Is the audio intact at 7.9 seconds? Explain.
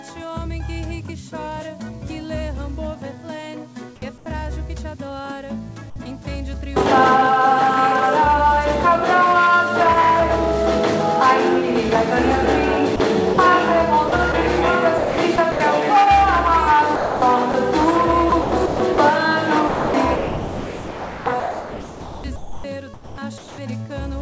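Yes, the audio is intact at 7.9 seconds, with no dropout, glitch or other fault at that moment, only the steady band-limited sound of the call path with nothing above 8 kHz.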